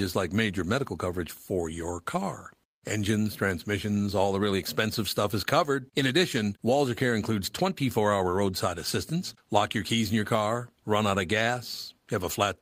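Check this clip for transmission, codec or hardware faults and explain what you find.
No faults can be heard anywhere in this recording.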